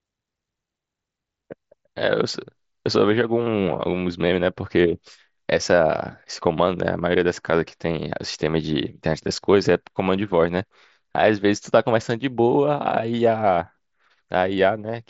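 Nothing stood out on listening to this speech, which arrives over a Bluetooth mSBC headset link with its upper content stopping near 7.7 kHz.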